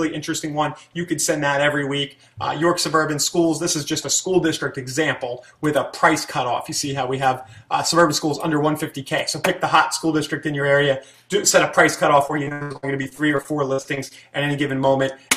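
Between 12.27 and 14.12 s the audio breaks up with repeated packet loss, giving a choppy, robotic sound. Some sixteen short holes, the longest 82 ms, are each patched by prolonging the preceding sound, concealing about 29% of the stretch. It stutters, unlike steady codec warble.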